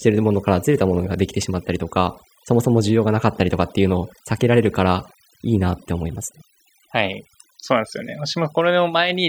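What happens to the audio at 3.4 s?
At 3.4 s the speech is affected by overdone noise removal, which runs through the whole clip rather than starting there. The noise reducer is set so aggressively that any frequency band close to its noise estimate is pulled far down or switched off, and quieter parts of the voice are removed along with the noise. The background drops to near silence dotted with twinkling specks.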